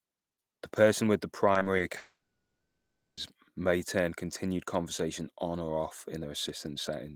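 This speech clip suffers repeated packet loss (robotic sound) from 1.53 to 1.81 s. Audio packets went missing four times in quick succession, each gap no longer than 20 ms. The receiver bridged every hole by extending the last bit of sound, so about 29% of that stretch, some 80 ms, is patched-in filler. The result is choppy speech with small pieces gone. From 1.97 to 3.19 s there is most likely a long network dropout, where the stream stopped arriving altogether. The sound first carries on as a fading buzz or hiss from the last audio heard. About 650 ms of it is plain silence. Speech resumes after roughly 1.2 s with that whole section missing.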